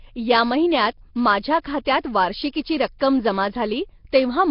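From start to finish the speech carries a rough, hissy halo and a smeared, underwater quality, with nothing above about 5.3 kHz. This is heavy damage, likely from Nellymoser compression. That Flash-era codec coded each 256-sample block at a fixed two bits per sample and filled starved bands with noise, and the result here points to roughly 22 kbps. Plain low-bitrate MP3 sounds different: it warbles and swirls, while this clip has a steady grainy fizz.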